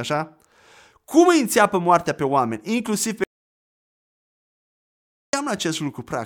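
At 3.24 s the speech hits an audio dropout to silence, most likely because the input feed was briefly lost, through a disconnected source, a broken link or an accidental mute, while recording carried on and filled the gap with silence. The speech stops abruptly mid-flow and the track goes completely dead, with no room tone at all, until 5.33 s, when speech resumes just as suddenly. About 2.1 s of speech is simply missing.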